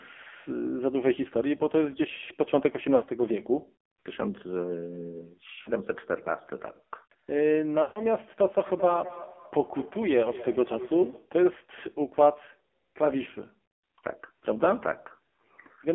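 AMR narrowband mobile codec damage runs through the whole clip and is heavy. The speech sits in a band of roughly 250 Hz to 3.4 kHz, with nothing above 4 kHz. The vocal tract model is driven by very few pulses, which makes the voice buzzy and synthetic. That points to a low bitrate, around 5.9 kbps. The lowest bass loss partly reflects the call's microphone high-pass, which is normal.

Lost AMR speech frames come next, at 2.96 to 3.04 s (about 60 ms), 5.62 to 5.70 s (about 40 ms) and 7.82 to 8.05 s (about 140 ms). These lengths fit runs of 20 ms frames that failed their checksum. In each gap the decoder repeats the last good pitch and vocal tract settings with falling gain, so the sound is drawn out, warbles and fades. The voice returns weak or rough for a moment afterwards.

Feedback echo between two devices follows, from 8.67 to 11.35 s. Speech comes round again at about a fifth of a second, with the loudest repeat about 16 dB below the direct speech. 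A second device in the room is on the same call and plays this side's audio, which the microphone picks up again. The local echo canceller only removes its own device's output, so the returned copy gets through, thinner and more ringing than the original.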